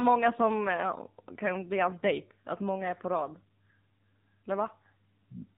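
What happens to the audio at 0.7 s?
At 0.7 s the speech is still passing through the AMR narrowband mobile codec that runs the whole clip, squeezed hard enough to suggest a low mode around 6.7 kbps. Everything above 4 kHz is gone, and the sparse pulse-driven voice model leaves the speech buzzy, thin and synthetic.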